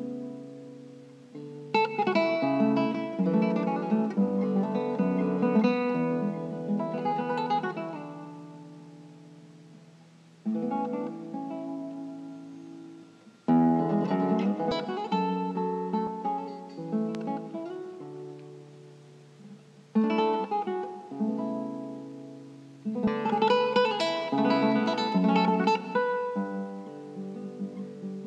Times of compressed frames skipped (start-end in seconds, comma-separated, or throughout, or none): 14.71, 16.07, 23.07